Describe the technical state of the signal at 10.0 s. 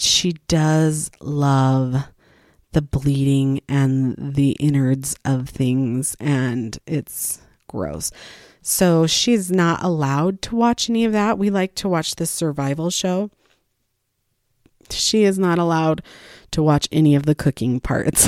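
At 10.0 s the signal is intact, with no dropout, clipping, glitch or other fault audible at that point.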